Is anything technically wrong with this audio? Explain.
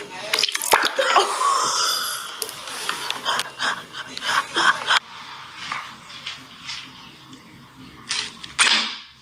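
Yes, there's gain pumping throughout. The gain swings roughly 20 dB, pulled down under each loud moment so loud and soft parts end up closer in level and the sound is squashed, likely from input gain set far too high with a fast limiter clamping it.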